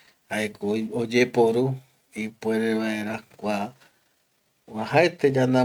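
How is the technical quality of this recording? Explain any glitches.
No technical glitches are audible.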